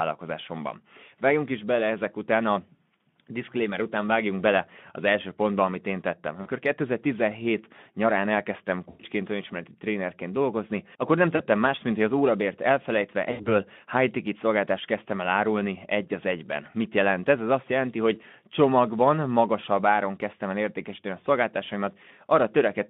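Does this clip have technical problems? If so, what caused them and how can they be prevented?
Yes. At four points the speech briefly smears into a buzzy tone or a coloured noise that fades before recovering: 6.41 to 6.49 s after "pontba amit én tettem"; 8.89 to 9.04 s between "nyarán elkezdtem" and "önismereti trénerként dolgozni akkor"; 11.35 to 11.43 s; and 13.31 to 13.47 s between "hogy az órabért elfelejtve" and "high ticket szolgáltást kezdtem". This is VoIP packet loss concealed by the speech codec. Roughly 40, 100, 40 and 80 ms of audio went missing, and the Speex decoder, working in its narrow telephone band, filled each hole by repeating its last pitch and filter at falling gain. Because each frame builds on the one before, the voice stays weak or distorted just after each gap. To prevent it, use a more reliable network path with a larger jitter buffer, or enable forward error correction or redundancy so lost packets can be rebuilt rather than guessed.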